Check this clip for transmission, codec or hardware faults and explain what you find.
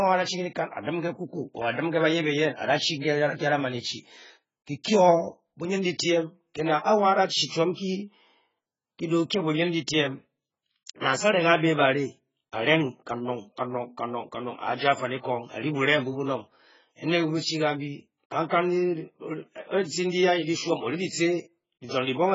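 One codec fault runs through the whole speech clip. Throughout, the sound is dull and smeared, with a fizzy, warbling texture on sibilants. Likely AAC compression at a very low bitrate, one consistent with about 12 kbps: the encoder coarsely quantises frequency lines, leaving spectral holes and nothing above 7.5 kHz. A spectrogram shows a hard ceiling there and patchy, blocky gaps below.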